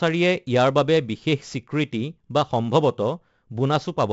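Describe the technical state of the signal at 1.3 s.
At 1.3 s the speech carries 4-bit ADPCM compression, present across the whole clip rather than at this moment alone. Each sample is coded as a coarse 4-bit step from a predicted value, with the step size adapting as it goes. The error is a gritty hiss that rises and falls with the speech, heavy here, with roughness on sharp onsets. Nothing is left above 7.7 kHz, which fits a 64 kbps stream at a low sample rate.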